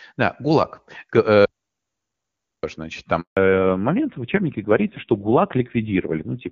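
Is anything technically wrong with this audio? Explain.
Yes, there are three problems in this speech clip.

From 1.46 to 2.63 s there's an audio dropout to silence: the speech cuts off mid-flow and about 1.18 s is silent, with no room tone at all. Likely the input went away briefly, a dropped link or stray mute, while recording carried on.

At 3.21 s you get a handover gap. The call was being passed between networks and no speech frames came through for 160 ms, so the sound fades out almost instantly and sits silent until 3.37 s, when the new link picks up.

Right after that, from 3.37 s to the end, there's a fallback to narrowband. Before it, the HD Voice link at 23.85 kbit/s AMR-WB sounds clean. It then drops to AMR-NB at 5.9 kbit/s, so nothing above 4 kHz survives, and the speech goes duller and rougher.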